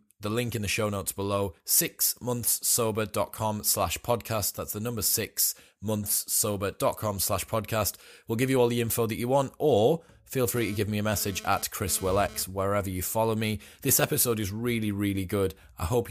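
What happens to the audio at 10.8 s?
GSM phone buzz runs from 10.56 s to 12.43 s, so 10.8 s sits inside it. A 2G handset close to the recording chain was sending radio bursts about 217 times a second, and the audio circuitry rectified those pulses into a hard, raspy buzz at 217 Hz with a dense stack of harmonics, about 19 dB below the speech. Because the phone was moving data, the buzz arrives in an intermittent stretch.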